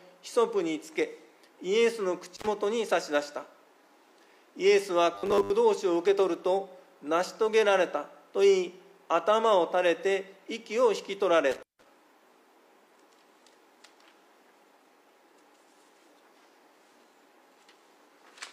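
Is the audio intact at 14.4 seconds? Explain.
Yes, the audio is intact at 14.4 seconds, with no dropout, click, distortion or other fault audible at that point.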